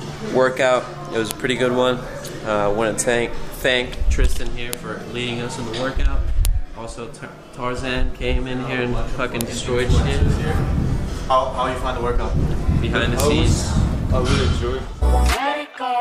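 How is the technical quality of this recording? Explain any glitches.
The quality is let down by a run of sharp clicks, five of them, at 1.31, 4.73, 6.45, 9.41 and 13.2 s. Each is a file header played as audio. The clip sounds like it was stitched or streamed from separate WAV pieces with their headers left in, so those few dozen bytes of header get read as sample values. You hear a brief, loud snap at each join, sitting on top of whatever the sound is doing at that moment.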